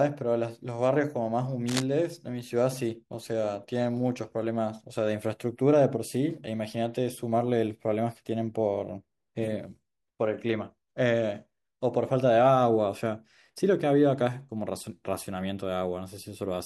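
A speech recording with one fault: cable scratch noise from 1.67 to 1.85 s. A dense, ragged burst of scratching sits over the speech for under a fifth of a second, only slightly quieter than it. The likely cause is a worn cable or connector being moved, so its contact resistance flickers.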